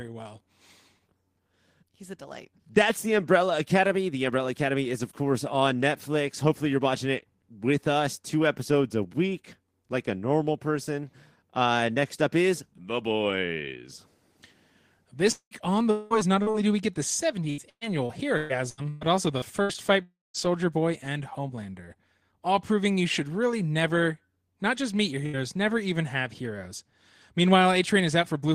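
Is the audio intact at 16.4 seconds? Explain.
No, not quite. Around 16.42 to 16.49 s there's a short concealed packet loss. About 40 ms of the call didn't reach the decoder in time, so the receiver patched roughly 39 ms of it by extending whatever sound came just before, carrying its pitch if voiced or its shaped noise if not, then crossfading back into the real signal. You hear it as a quick smear or wobble right there.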